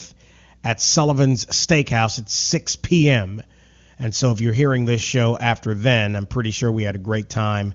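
No technical faults are audible.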